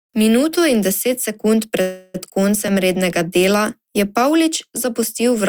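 Packets were likely held up in transit so the jitter buffer ran dry, causing a call audio freeze from 1.81 to 2.16 s. The last sound is stretched into a fading buzz, then speech resumes where it stopped, now running about 0.33 s late.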